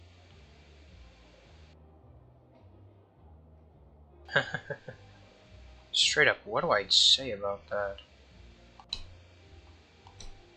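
No technical faults are audible.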